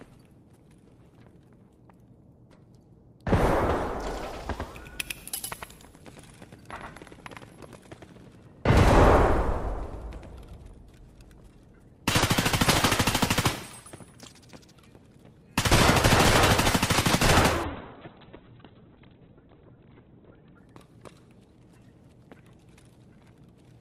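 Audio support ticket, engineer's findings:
Doubled audio track, 4.05–10.67 s: hard-edged repeat about 100 ms late, roughly 5 dB down, no decay. Waveform shows offset twin transients. Likely a second capture path.

Call bitrate drop, 17.64–20.65 s: coarse, watery, muffled sound. Spectrogram cuts off above 4 kHz (from 20 kHz) for about 2.95 s. Consistent with the encoder falling to roughly 7 kbps.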